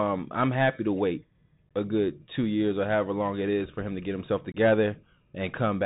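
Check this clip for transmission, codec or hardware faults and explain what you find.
Two faults are present: a narrowband Bluetooth headset codec colouring the whole clip, and two brief dropouts in the speech.

The Bluetooth CVSD headset codec runs throughout, and the sound fits a 64 kbps CVSD link. Each sample is coded as a single up-or-down bit, with a step size that adapts to the signal. Because the channel is narrowband, nothing above 4 kHz survives. Loud, fast-rising high content outruns the step and distorts, sibilants come out scratchy, and a granular hiss sits under the speech; the codec damage is plainly audible.

Unconcealed Bluetooth headset packet loss occurs at 1.69 s, where about 15 ms of audio vanishes, and again at 4.52 to 4.57 s, where about 22.5 ms drops out. In each case a handful of short voice packets between headset and phone failed to arrive, and no repair filled the gap. 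The result is a sudden hole with hard edges that can click, and the speech resumes quieter for a moment as the CVSD step size rebuilds.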